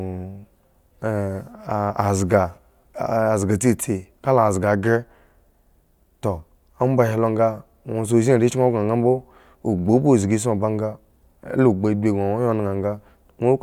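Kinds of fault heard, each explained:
No faults turn up anywhere in this speech recording, so there's nothing here to explain.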